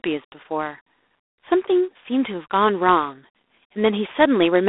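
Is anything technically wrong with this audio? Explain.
Yes. Throughout, the speech passes through G.726 ADPCM coding, with too few bits for each predicted difference, a harsh level-following rasp that fits 24 kbit/s, band-limited to 300 Hz–3.6 kHz, nothing above 3.8 kHz.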